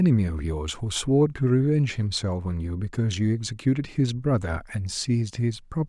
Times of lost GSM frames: none

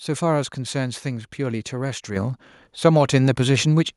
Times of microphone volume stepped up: 2.16

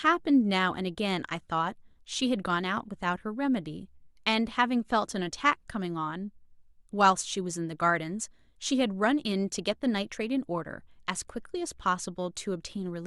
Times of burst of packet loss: none

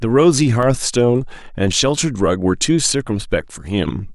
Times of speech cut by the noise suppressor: none

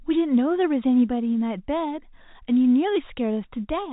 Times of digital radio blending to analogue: none

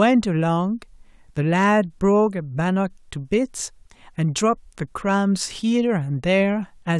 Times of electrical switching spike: 4.38

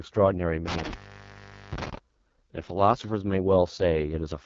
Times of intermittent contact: 0.68-1.98

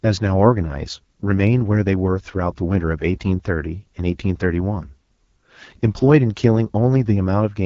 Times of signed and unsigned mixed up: none

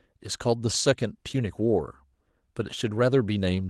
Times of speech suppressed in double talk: none

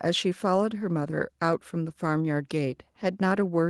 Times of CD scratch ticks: none

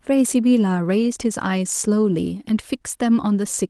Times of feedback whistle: none

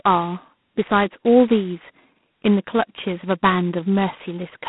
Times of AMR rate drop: none

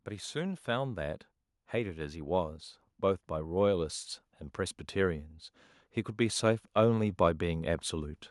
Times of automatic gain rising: 0.05-4.01

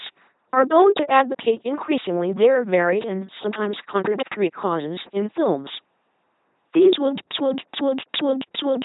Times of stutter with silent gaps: 7.20-8.85

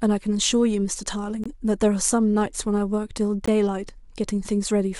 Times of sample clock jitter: none

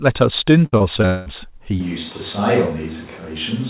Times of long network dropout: 1.06-1.28

